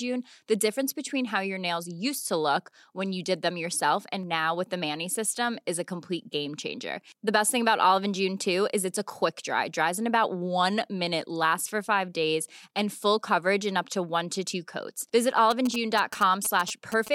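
From 15.51 s to 17.09 s, a galloping dit-dit-dit of brief 217 Hz buzzes runs roughly 10 dB below the speech. These are GSM signalling bursts: short radio bursts from a nearby 2G phone, rectified by the audio circuitry into audible interference.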